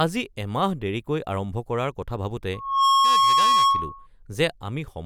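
Just after "আৰম্ভ কৰাৰ কথা ভাবোঁতে", at 2.53 s, a steady tone near 1.1 kHz swells out of the speech within about a third of a second and rings on until 4.07 s, standing around 10 dB louder than the talker. This is loudspeaker feedback squeal: the microphone hears the loudspeaker it drives, and at that one frequency the loop gain tops unity, so the tone keeps feeding itself until the loop is broken.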